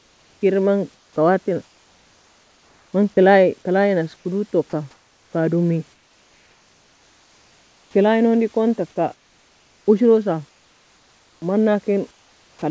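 Through the pauses at 0.0–0.41, 0.95–2.93, 4.16–5.33, 5.93–7.94, 9.14–9.86, 10.49–11.42 and 12.11–12.62 s, the real room background gives way to comfort noise in place of the background: a flat, featureless hiss, in most of them sitting about 3 dB lower, likely because the sender stopped transmitting in silence and the receiver synthesised filler. Inside one of those gaps, at 4.70–4.73 s, a sliver of speech is likely dropped by the voice detector and swapped for that same steady noise.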